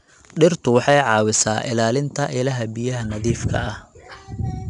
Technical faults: 4-bit ADPCM compression

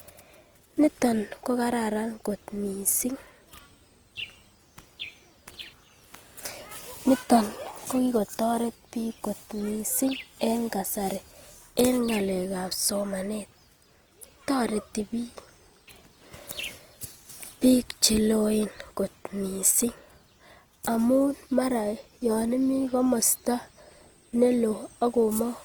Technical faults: Opus compression

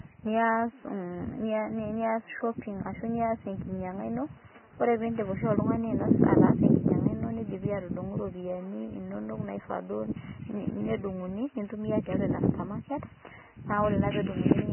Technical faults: Vorbis compression

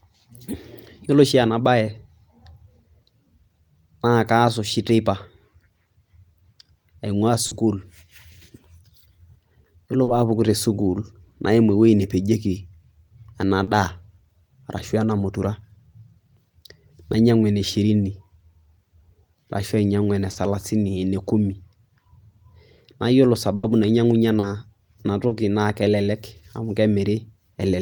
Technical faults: short concealed packet loss; burst of packet loss

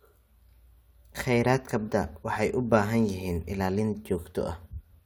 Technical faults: compressed frames skipped

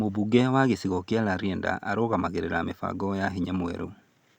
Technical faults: none

